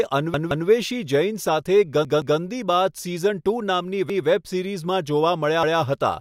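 Repeated buffer stutters at 0.34–0.68 s and 2.05–2.39 s (two extra plays each), then 4.10–4.27 s and 5.63–5.80 s (one each). A 171 ms speech segment, which fits an 8192-sample buffer, replays with hard joins when new audio arrives late.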